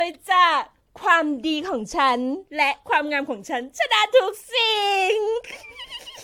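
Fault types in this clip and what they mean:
Generation loss: repeated lossy re-encoding, each pass quantising on a shifted frame grid so errors and spectral holes accumulate. The speech sounds swirly, smeared and hollow, with blurred attacks and nothing above 18.7 kHz, likely from around four passes through a 96 kbit/s AAC-LC chain.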